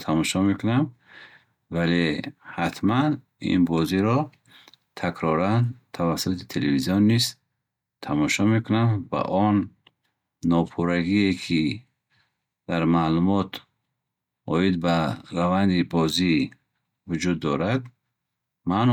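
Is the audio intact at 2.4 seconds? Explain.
Yes, at 2.4 seconds the speech plays through intact, with no dropout, click, distortion or other fault at that moment.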